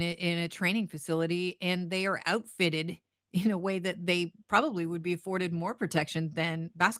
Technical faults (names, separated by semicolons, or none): none